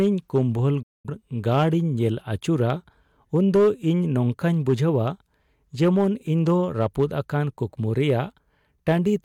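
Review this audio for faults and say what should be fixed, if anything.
Hard clipping throughout: the speech is driven about 6 dB past what the chain can pass, so a small share of peaks are cut flat, giving crackle on loud syllables. Lower the gain before conversion so peaks stay below full scale.

Digital broadcast dropout from 0.82 to 1.10 s: the receiver lost valid frames and muted with a quick 8 ms fade, leaving a 213 ms gap that fits about five lost frames. Improve reception or signal strength at the receiver so frames arrive intact.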